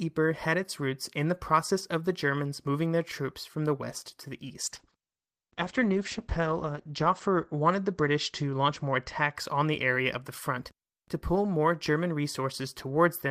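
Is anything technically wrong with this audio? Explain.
Yes, there is a call bitrate drop from 4.65 to 9.57 s. The call's bandwidth estimate fell and the Opus encoder had fewer bits to spend, which fits a cut from 32 kbps to 10 kbps. The top end narrows from 20 kHz to 8 kHz, so the speech turns muffled and rough, worst for about 2.1 s, before recovering.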